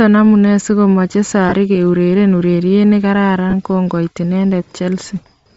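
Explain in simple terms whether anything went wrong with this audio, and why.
Two things went wrong, both tied to a Bluetooth connection.

First, the whole recording was likely squeezed through Bluetooth LC3 compression, the codec used by newer Bluetooth LE Audio headsets. To save data it throws away much of the high-pitched detail and fills the gap with synthetic noise. Throughout the speech this is plainly audible as a breathy, grainy edge on the voice, a bit like hearing it through a fuzzy filter.

Second, there are lost LE Audio frames at 1.49 to 1.53 s and again at 3.50 to 3.54 s. Each time, about 30 ms of audio never arrived, so the decoder patched the hole by reusing the last bit of sound it had, scrambled at random. You hear a brief noisy smear or blur in the speech at those two moments.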